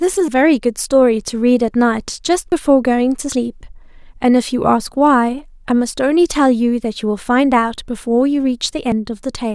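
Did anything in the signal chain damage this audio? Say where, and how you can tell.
Yes. At the driver or buffer stage, the capture software likely failed to collect its samples before the hardware overwrote them, a dropped buffer (overrun). Each lost chunk is spliced straight to what follows, so nothing falls silent. Instead the speech skips ahead at 0.28, 2.52, 3.32 and 8.92 s. The jumps are short: about a tenth of a second at 0.28 s, under a tenth elsewhere.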